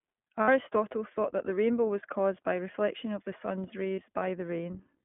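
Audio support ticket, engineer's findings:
iLBC codec throughout: narrowband coding, 20 ms frames, consistent with the 15.2 kbps mode. Nothing above 3.4 kHz, little below 150 Hz. Speech plainly rough and synthetic.

Lost iLBC frames at 0.42–0.49 s (60 ms, about three frames) and 3.97–3.99 s (20 ms, one frame). Decoder repeats last pitch cycle with noise: brief buzzy held vowel, then immediate recovery.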